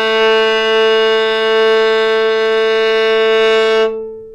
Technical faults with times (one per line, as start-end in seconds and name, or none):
none